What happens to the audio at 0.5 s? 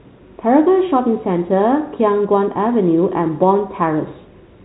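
Nothing goes wrong at 0.5 s: the speech passes through intact at that moment, carrying only the narrow, telephone-band character of its G.711 coding.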